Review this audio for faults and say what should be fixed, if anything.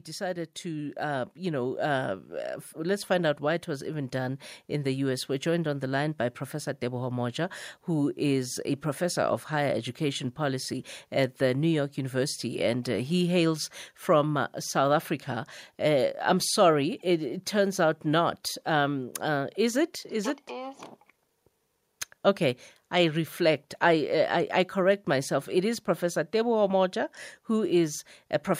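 Automatic gain rising, 0.17 to 15.56 s: the gain control judged the speech input too quiet and raised gain by about 9 dB, lifting voice and background together. To prevent it, set a suitable fixed input level and disable automatic gain control during recording.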